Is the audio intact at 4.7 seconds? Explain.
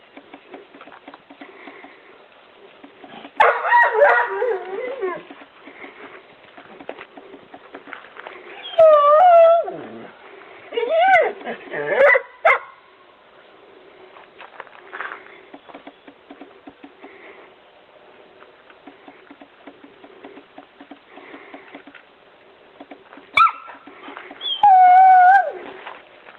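Yes, the audio is intact at 4.7 seconds, with no fault there beyond the ordinary character of a call path that is working normally.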